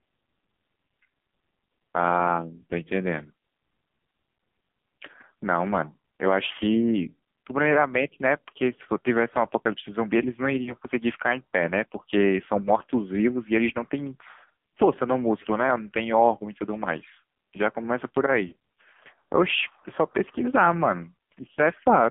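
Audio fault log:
throughout, AMR narrowband mobile codec: the speech sits in a band from about 150 Hz to 3.4 kHz and sounds heavily buzzy and synthetic, which fits a low-rate AMR-NB mode near 5.9 kbps, where a few pulses drive a vocal-tract model and everything above 4 kHz is discarded.
10.64–10.73 s and 18.48–18.54 s, lost AMR speech frames: brief dips and warbles where the decoder repeats the last good pitch and vocal-tract settings at falling gain. The first sounds like one missing 20 ms frame, the second like about 40 ms, so it is twice as long.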